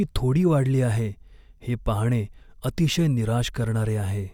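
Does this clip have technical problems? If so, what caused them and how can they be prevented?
Yes. Twice the playback device ran short of fresh audio and played its last buffer again, a repeated buffer fault. Each repeat is about 5.3 ms long, which fits a 256-sample buffer, and the piece is heard once extra. At 1.60 s, between "थोडी वाढली आहे" and "हे पाहणे", and again at 2.94 s, the doubled slice meets the following audio with a hard join, giving a brief click rather than an audible stutter, with essentially nothing of the speech lost. Using a larger playback buffer, or giving the audio thread higher priority so it never starves, would prevent these repeats.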